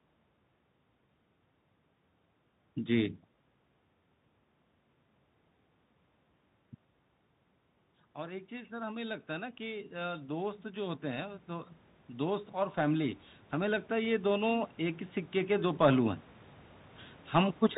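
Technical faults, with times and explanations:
throughout: Bluetooth CVSD headset codec. One-bit delta coding at 64 kbps cuts everything above 4 kHz, roughens s sounds and leaves a plainly audible granular hiss.
8.15–16.24 s: automatic gain rising. After the talker moves back around 6.5 s, the level falls about 20 dB. Gain then climbs slowly by about 16 dB, swelling voice and room noise together.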